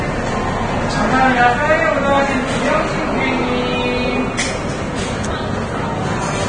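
Heavy Vorbis compression runs throughout, likely at a low bitrate. Nothing survives above 9.7 kHz. The treble turns hissy and grainy, and attacks blur.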